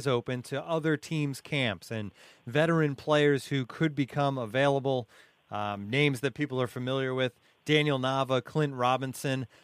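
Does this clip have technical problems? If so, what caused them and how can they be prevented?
Yes. A scratch or blemish on the disc destroyed more data than the player's error correction could rebuild, once per revolution, so the player patched over the damaged samples. That produces CD scratch ticks: four evenly spaced ticks in the speech between 3.17 and 3.88 s, each no longer than about a millisecond. Cleaning or resurfacing the disc, or ripping it with a secure extractor that re-reads damaged sectors, would prevent them.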